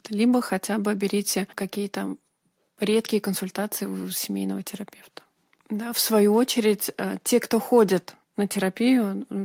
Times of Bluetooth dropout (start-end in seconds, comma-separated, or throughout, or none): none